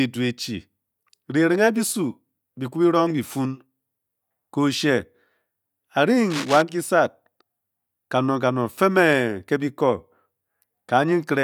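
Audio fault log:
6.30 to 6.62 s, cable scratch noise: a dense, ragged burst of scratching and rustling sits over the speech for about a third of a second, fairly prominent at roughly 10 dB below the speech level. The uneven, crackly texture points to a worn cable, connector or control being disturbed. Its contact resistance was likely jumping rapidly as it moved, chopping irregular noise into the signal path.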